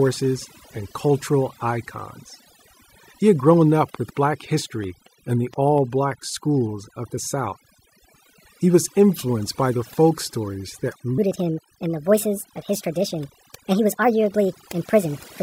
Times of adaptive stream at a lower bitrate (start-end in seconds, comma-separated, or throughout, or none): none